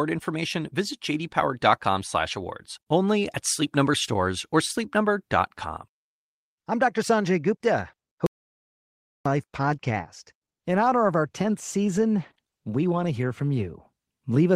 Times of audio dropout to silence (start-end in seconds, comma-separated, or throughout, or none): 8.26-9.26